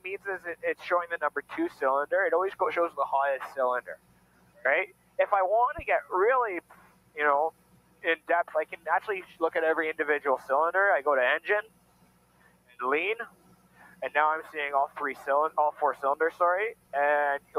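The audio keeps sagging and recovering in level, with sustained parts and tails dipping while sharper onsets come through intact. That swing of around 15 dB gives the whole clip a pumping, thinned-out quality. It comes from a noise suppressor applied to music or sounds: a processor tuned for speech is reading the steady and decaying parts of this material as background noise and pulling them down, letting only the transients escape.

The damage concentrates in four stretches of sound cut by the noise suppressor, from 0.0 to 1.82 s, 2.9 to 5.19 s, 6.61 to 9.4 s and 11.62 to 17.55 s, with the deepest drops about 15, 17, 16 and 17 dB respectively. Within each stretch only part of the time is pulled down, from well under a second in the first to about three seconds in the last. Held material sinks noticeably and decays are chopped short rather than fading naturally.

Between 5.79 and 5.95 s there is a low, dull thump that dies away in about 36 ms. 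This is a phantom power thump: switching phantom power or a similar supply on a live input sends a voltage step through the input's coupling capacitors, and it reaches the recording as a short bass pulse.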